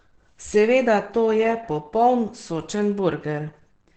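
Speech, muffled and hoarse throughout, with nothing above 8.7 kHz, likely from heavy Opus compression in its SILK speech mode at a low rate around 12 kbps.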